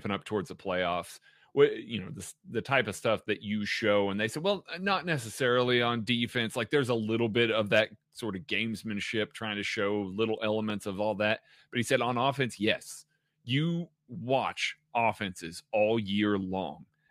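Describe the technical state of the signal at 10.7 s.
A single loud pop at 10.70–10.72 s, likely a voltage pulse, peaks roughly 5 dB above the speech: a spike on the waveform and a thin broadband vertical stripe on the spectrogram.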